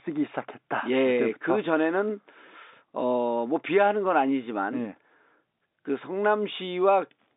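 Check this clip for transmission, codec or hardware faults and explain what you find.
Nothing stood out on listening to this telephone-band speech, which reaches up to about 3.8 kHz as G.711 coding allows.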